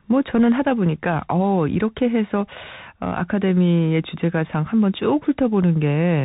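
From start to finish the speech sounds muffled and boxed in, with scratchy s sounds, a grainy hiss underneath, and harsh distortion on loud bright moments. That is the Bluetooth CVSD headset codec, which passes nothing above 4 kHz and whose one-bit up-or-down steps, which fit a 64 kbps stream, can't keep pace with sharp high-frequency swings.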